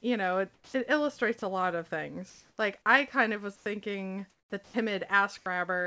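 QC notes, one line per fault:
0.54–0.74 s, 2.30–2.58 s, 3.56–3.66 s, 4.30–4.52 s: comfort noise in place of the background. The pauses before "it illustrates a lot" and after "I kind of was" are replaced by steady, featureless hiss, about 4 dB quieter or 2 dB louder than the real room tone. This is likely discontinuous transmission at work. On a spectrogram it shows as smooth, uniform noise without the background's texture. The waveform envelope is flat.
1.40 s, 2.82–2.86 s, 4.64–4.74 s, 5.38–5.46 s: sound dropped by the voice detector. Short stretches of sound, up to 90 ms, including just before "I kind of was", cut out abruptly into flat synthetic noise. The likely cause is the detector misreading the sound as background. On a spectrogram the sound breaks off sharply, and the waveform collapses to a low floor.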